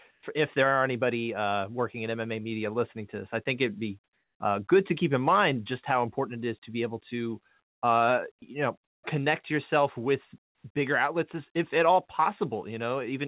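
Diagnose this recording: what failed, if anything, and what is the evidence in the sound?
Comfort noise in place of the background, likely from the call's discontinuous transmission, at 0.11–0.23, 4.04–4.4 s after "I think it'd be" (about 7 dB quieter), and 10.46–10.64 s (about 10 dB down). The room is swapped for flat synthetic hiss.

Onset clipped by the voice detector at 0.21 s: about 20 ms missing before "if there are anybody", so the start snaps in abruptly, likely the detector triggering late.

Sound dropped by the voice detector at 8.39–8.42 s: a 30 ms slice goes to steady noise, likely quiet sound misread as background, all within this narrowband path that stops at 4 kHz.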